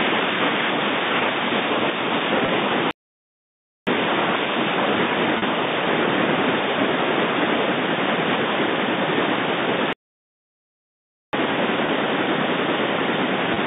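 At 2.46 to 2.48 s there is packet loss with pitch repetition. About 20 ms of audio went missing. The receiver filled it by repeating the last pitch period. It sounds like a brief, slightly buzzy hold. The same happens at 5.38 to 5.42 s, over 40 ms, and again at 11.86 to 11.88 s and 13.54 to 13.56 s, each 20 ms.

A playback stall runs from 2.91 to 3.87 s, almost a second. A second stall runs from 9.93 to 11.33 s, about 1.4 s. The sound stops dead mid-flow, then resumes. The player likely ran short of data or was blocked.

The narrow telephone band throughout fits G.711 coding.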